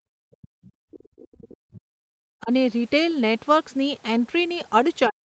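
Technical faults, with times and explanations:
0.00–2.52 s and 5.08 s to end, speech suppressed in double talk: the speech dips by up to about 40 dB for roughly two seconds in total, likely an echo canceller muting both sides during overlap.
1.74–1.81 s, other side's voice leaking through: a brief faint second voice at about 25 dB below the speech, likely loudspeaker echo the canceller failed to remove.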